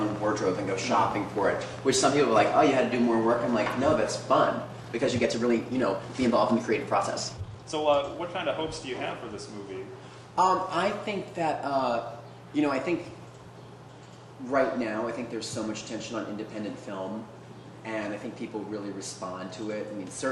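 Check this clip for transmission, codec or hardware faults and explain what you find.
Two faults show up, both in the first half.

From 0.03 to 4.09 s there's a train of clicks: around forty uneven pops, roughly 8.4 a second, peaking about 5 dB above the sound, likely interference or a faulty connection.

Then 4.54 to 8.20 s is a time-stretched section, sped up 1.42 times with pitch held, so it turns rushed, likely software trimming pieces to fit a length.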